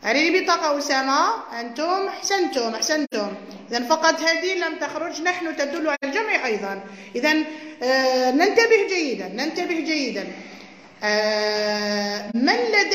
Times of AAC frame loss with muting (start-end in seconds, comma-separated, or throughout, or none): 3.04-3.14, 5.94-6.04, 12.30-12.36